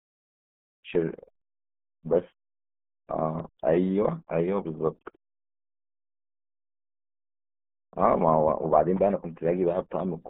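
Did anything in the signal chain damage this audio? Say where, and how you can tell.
Yes. From start to finish the speech is muffled and gargly. The spectrum stops dead at about 3.8 kHz, and the usable band runs only from roughly 150 Hz to 3.4 kHz. That points to the codec stage, specifically the RealAudio 14.4 codec (RealAudio 1). The heavy coding damage fits an 8 kbit/s stream built for dial-up modems, which discards everything above the narrow speech band.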